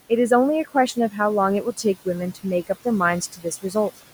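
From the start, the background pumps down between phrases and swells back under them. These are noise suppressor artifacts: the suppressor pulls the room noise, which sits about 17 dB below the speech, down by about 16 dB frame by frame. Between 3.32 and 3.45 s, part of the speech goes faint and swallowed, dipping by up to about 13 dB over roughly a sixth of a second. This is speech cut by the noise suppressor, which mistook that quiet stretch for background noise and turned it down.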